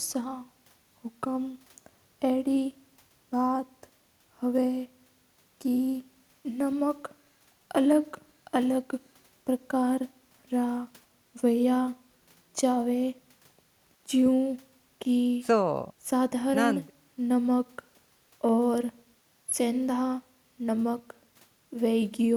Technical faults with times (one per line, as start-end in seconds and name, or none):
none